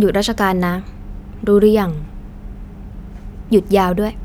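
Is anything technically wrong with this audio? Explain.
No, the signal has no audible technical problems anywhere in the recording.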